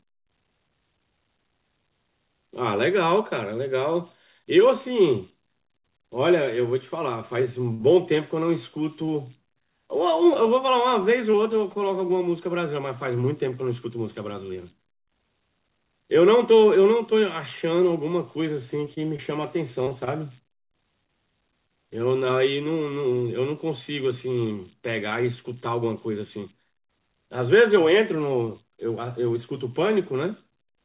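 The audio is speech carried over a call path. An idle tone, roughly 7 kHz and about 26 dB below the signal, runs through the whole clip. These are converter idle tones. An undithered delta-sigma converter settles into repeating bit patterns when its input is small, and those patterns sound as tones in pauses and grain under quiet passages. From 7.74 to 7.87 s there is a short stall from a late packet. A packet arrived late and the jitter buffer ran dry, so the last sound was held for 53 ms. Nothing is lost, but the sound drags and the delay grows by 53 ms. At 9.06 s a short concealed packet loss leaves a brief smear. About 20 ms of audio never reached the decoder, and the receiver filled the hole by extending the preceding sound before blending back. Scattered short gaps appear from 10.34 to 11.84 s, about five of them, the longest around 20 ms. They return from 18.85 to 22.31 s, about ten, the longest around 30 ms. 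Each one is a lost or late packet patched by continuing the last sound, heard as small ticks and hiccups.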